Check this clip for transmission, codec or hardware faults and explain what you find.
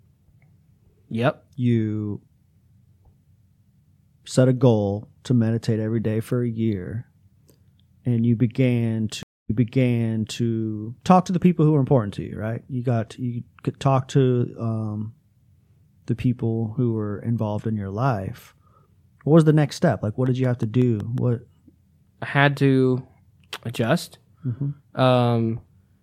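Two faults are audible in the speech.

From 9.23 to 10.40 s, after "and you began", a stream reconnect: about 0.24 s of silence after the dropped connection, then a restarted decoder replays audio from 0.94 s earlier. The waveform shows a flat gap followed by repeated material.

From 20.26 to 21.19 s, a train of clicks: about seven regular pops at 5.5 per second, roughly as loud as the speech, likely from electrical interference. The spectrogram shows them as evenly spaced vertical broadband lines.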